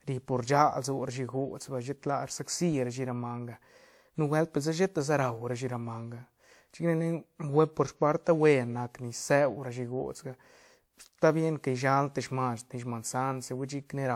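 Generation loss runs throughout. The speech sounds swirly, hollow and smeared, with blurred attacks, likely from about seven passes through WMA at 128 kbit/s.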